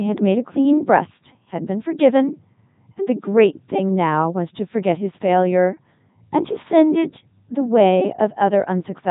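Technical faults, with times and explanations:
Throughout, Codec 2 vocoder: the speech is rebuilt from pitch, voicing and a spectral envelope as summed sine waves, so it sounds robotic and buzzy. The damage is heavy and fits its 3.2 kbit/s mode. Unlike waveform-codec smearing, the original waveform is simply gone.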